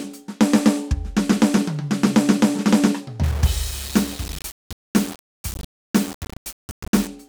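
From 3.24 s to 7.07 s the music turns grainy, a sign of low bit depth without dither, likely from the signal being rounded to a grid of only 5 bits. With so few levels, the error tracks the music instead of staying as steady hiss, sitting roughly 15 dB below it. Quiet passages become gritty. A zoomed waveform shows staircase steps, and a spectrogram shows broadband haze that rises and falls with the music.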